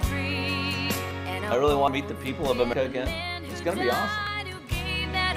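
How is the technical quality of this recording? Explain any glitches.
The recording is marred by four abrupt skips. At 1.11, 1.88, 2.73 and 4.27 s there is a sudden jump in the sound, about a tenth of a second missing at 1.11, 1.88 and 4.27 s, and roughly three tenths at 2.73 s. This is likely a dropped buffer (overrun), where unread audio was overwritten and the edges were spliced together.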